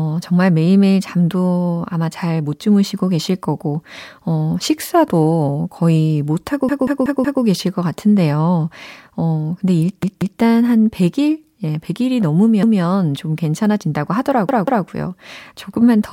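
Repeated buffer stutters occur at 6.69 to 7.43 s, 10.03 to 10.40 s, 12.63 to 12.82 s and 14.49 to 14.86 s. Fresh audio arrived late, so the last chunk of about 186 ms replayed with hard joins. That length fits an 8192-sample buffer. The speech then resumes without any gap.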